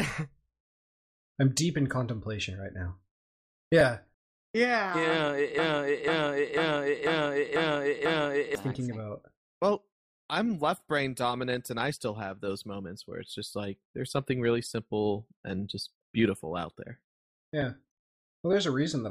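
From 5.58 to 8.55 s a half-second fragment, 0.49 s long, plays six times back to back, stuttering identically: a broken-record loop. A stalled player or stream likely kept resending its last buffered piece, so the audio meant for that stretch is lost.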